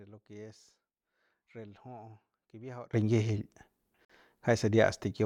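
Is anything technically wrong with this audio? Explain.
Yes, two faults can be heard in this speech clip.

One channel inverted, from 0.00 to 2.93 s: the speech drops by about 20 dB when the stereo is folded to mono, which is most likely because one channel's polarity is reversed. The centred voice, identical in both channels, cancels when they are summed, leaving only their small differences. What remains is a faint trace of the speech until it returns to full level at 2.93 s.

Gap at a join of encoded pieces, at 4.05 to 4.10 s: a 46 ms silence opens in the continuous speech. The audio appears to have been encoded in separate pieces and joined without trimming, so the encoder's start-up delay and last-frame padding were left in at the seam. The edges are smeared by the codec, and the speech resumes exactly where it broke off.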